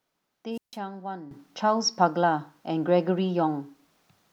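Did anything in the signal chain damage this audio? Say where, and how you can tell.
Yes. A wireless microphone squelch dropout sits in the radio link ahead of the converter, from 0.51 to 0.79 s. Hiss swells as the FM carrier fades, then the receiver mutes for about 153 ms. A spectrogram shows a broadband noise smear, then a blank gap.

At 1.31 s a sudden gain jump of about 12 dB lifts the speech and the noise floor together and holds until the end. On the waveform the envelope steps up in one sample. The likely cause is a digital gain setting applied without a ramp.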